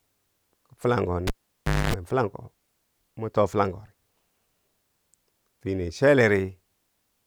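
At 1.27 s the cable's pulled and plugged back in: a pop, about 0.61 s of near silence, roughly 0.25 s of 50 Hz buzz, then another pop by 1.94 s.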